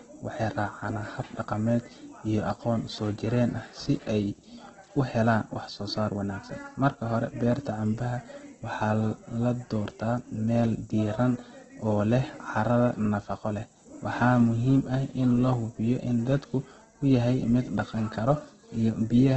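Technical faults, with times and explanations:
Throughout, Opus compression: the speech sounds grainy and rough with nothing above 8.3 kHz, likely from Opus music mode filling bit-starved bands with noise near 12 kbps.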